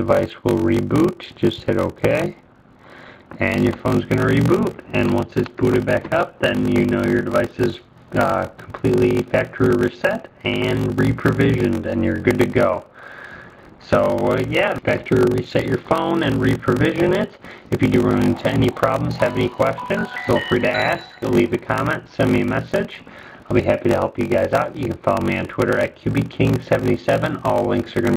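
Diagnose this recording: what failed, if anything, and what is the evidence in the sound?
A steady buzz at 46.9 Hz runs under the whole recording, and everything plays slow, at 0.861 times normal speed. This is a block size mismatch (padded) at the driver or buffer stage. One stage writes blocks about 14% shorter than the next stage reads, and the shortfall is filled with zeros. The buzz rate fits a 1024-sample read block at 48 kHz, and each block carries a short silent gap.

At 14.78 s the audio jumps forward with no gap, and about a second of material is simply gone. The sound on either side of the jump is butted together directly. This is a skip ahead at the network or jitter buffer stage. A run of audio was discarded while later audio was already queued, which cut the playout delay by roughly a second in one step.

From 14.90 to 16.14 s, and again from 17.02 to 18.55 s, the audio sounds hurried. 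It runs at 110% speed while the pitch stays put. This is jitter buffer speed-up. The buffer held more audio than its target, so the receiver cut out many short pitch-period-sized pieces in a row. It trimmed about a tenth of a second in the first stretch and about 0.15 s in the second, draining the excess delay.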